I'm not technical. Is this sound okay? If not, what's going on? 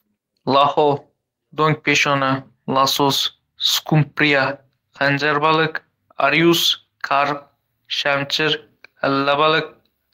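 Yes, it's fine: nothing in this recording sounds broken or out of place, so you can relax about it.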